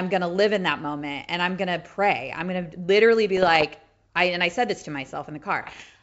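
Pops and rough, gritty bursts with brief jumps in level break into the speech from 3.37 to 3.67 s and again, harsher, from 5.62 to 5.84 s. These are bit errors on an ADPCM link, carried over a G.722 wideband path that itself sounds clean. Each flipped bit throws off the decoder's step size and predictor, so the damage rings on for milliseconds. The second burst sounds roughly twice as dense in errors.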